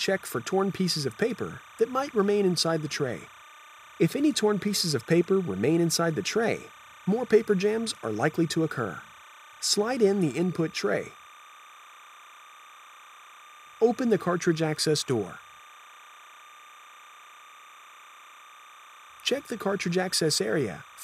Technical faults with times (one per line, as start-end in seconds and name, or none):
0.00-21.04 timecode bleed